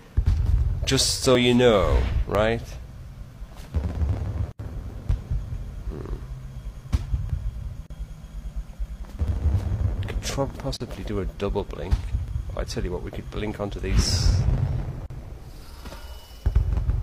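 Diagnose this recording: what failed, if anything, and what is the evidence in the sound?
Playback of the segmented stream failed: overlapping stream segments, trimmed at 1 s boundaries, lose a few tens of milliseconds, causing tiny skips at 1.35, 2.35, 7.30, 9.28, 10.30, 12.28 and 13.24 s.

The driver or buffer stage likely missed deadlines, so blocks of digital silence appear: 80 ms at 4.52 s and 40 ms at 7.86, 10.76 and 15.06 s, each cutting out and back with no fade.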